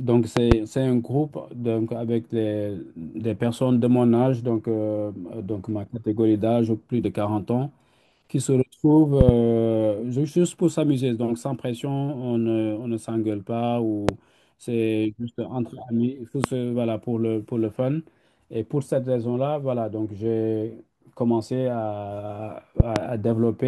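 A speech clip hit by loud pops five times: double pops at 0.37 to 0.54 s, 9.21 to 9.31 s and 22.80 to 22.99 s, and single ones at 14.09 to 14.11 s and 16.44 to 16.47 s. Each jumps roughly 20 dB above the speech, which carries on underneath. They're most likely sharp voltage spikes from a plug, switch, static or driver glitch, shaped into a thump by the circuitry downstream.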